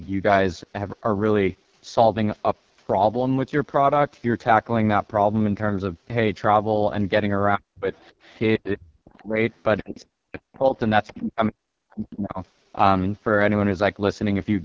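AMR wideband (HD Voice) codec damage runs through this whole speech recording: heavy rasp and roughness with nothing above 7.4 kHz, which fits the lowest 6.6 kbit/s mode. Speech suppressed in double talk occurs at 7.56–7.87, 8.58–9.39, 9.81–10.75 and 11.08–12.4 s, with the talker dropping by roughly 40 dB, likely an echo canceller turning everything down while both sides spoke. The other side's voice leaking through appears at 7.97–8.4, 9.05–10.03 and 10.54–11.09 s as a faint second voice about 25 to 30 dB below the talker, likely loudspeaker echo the canceller failed to remove.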